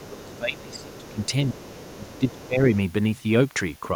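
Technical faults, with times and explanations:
0.0–1.19 s and 1.53–2.61 s, speech suppressed in double talk: The speech dips by up to about 20 dB, in patches adding up to roughly a second per span, likely because the echo canceller mistook overlapping talk for echo and turned everything down. A waveform shows a sagging envelope.
0.33–0.37 s, 0.75–1.28 s, 1.61–1.97 s and 2.16–2.47 s, other side's voice leaking through: A faint second voice sits about 25–30 dB under the speech, likely loudspeaker echo the canceller failed to remove. On a spectrogram it appears as weak, separate harmonic traces. A waveform barely shows it.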